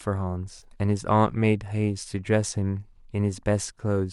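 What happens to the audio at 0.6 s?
A brief smeared, phasey patch runs from 0.59 to 0.64 s. This is AAC frame loss with concealment: the decoder patched about 30 ms of missing audio from the last good spectrum.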